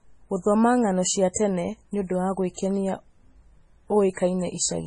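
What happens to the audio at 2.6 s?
Pre-echo sits from 2.56 to 2.58 s, just before a sharp attack in the speech. The codec spreads its quantisation noise across a whole transform block, so when the onset lands late in that block, the noise sized for the loud part also fills the quiet gap ahead of it. The result is about 27 ms of short hiss running into the attack, which itself sounds soft and smeared rather than crisp.

MP3 compression is the likely cause, and its damage is heavy here as everywhere in the clip. Nothing is left above 10.5 kHz, and the thin, watery texture points to a very low bitrate, on the order of 24 kbps. With so few bits, weak frequency lines drop in and out between frames, giving a swirly quality, and the coarse quantisation makes attacks like this one especially prone to pre-echo.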